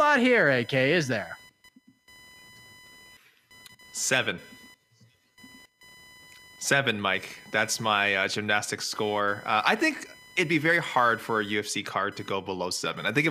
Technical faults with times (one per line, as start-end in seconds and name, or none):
0.00-13.30 computer activity noise